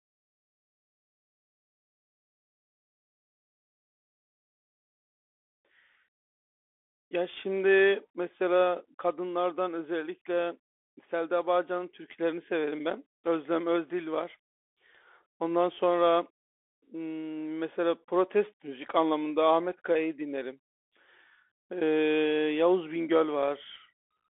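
Throughout, the speech passes through a Bluetooth CVSD headset codec. Its one-bit steps lag loud sounds, so s sounds scratch. Only 300 Hz to 3.5 kHz remains, over granular hiss.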